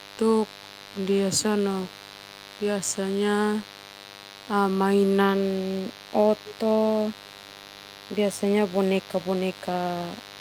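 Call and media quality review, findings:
Mains buzz, whole clip. Steady raspy buzz on a 50 Hz fundamental, around 20 dB below the speech, harmonics reaching into the kHz range. Switching spikes twice per mains cycle entering via dimmer, rectifier or an unshielded line into the capture chain.

Echo leak, 6.44 to 6.55 s. Brief delayed copy of the speech, about 224 ms behind, roughly 15 dB down, short and scrappy. Likely far-end loudspeaker pickup not fully removed by its echo canceller and returned.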